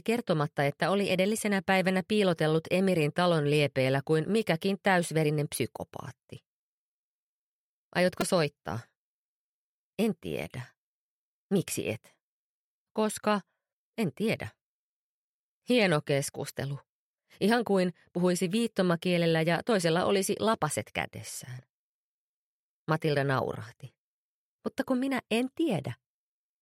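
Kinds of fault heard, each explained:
Repeated buffer: New audio failed to reach the output in time, so the device replayed its last block instead, four extra times. At about 8.21 s, a slice of sound only about 2.9 ms long, which fits a 128-sample buffer, repeats back to back with a hard join at each restart. Because the slice is so short, the repeats fuse into a click or brief buzz, near 340 Hz, rather than a stutter, and roughly 10 ms of sound goes missing.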